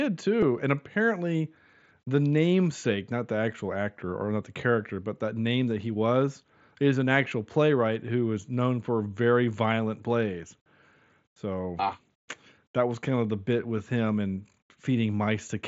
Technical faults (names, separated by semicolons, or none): concealed Bluetooth headset packet loss